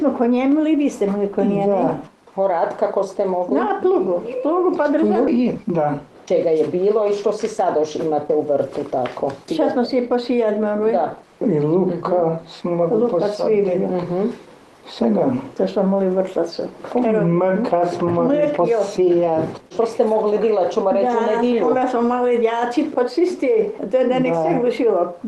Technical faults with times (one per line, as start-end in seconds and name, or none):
5.27 skip ahead
5.84-6.15 jitter buffer speed-up